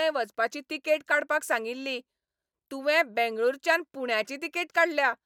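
Nothing in this bit of speech stands out as a technical problem; there's no glitch or disturbance anywhere to point to.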